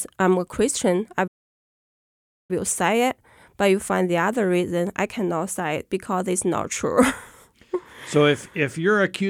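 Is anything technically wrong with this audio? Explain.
Yes, there is a playback stall in this speech clip. From 1.27 s to 2.51 s, the player likely ran out of buffered data or had its audio thread held up, so nothing reached the output until it caught up. That leaves a silence of about 1.2 s that cuts into the speech mid-flow rather than at a natural pause. The speech then resumes once playback recovers.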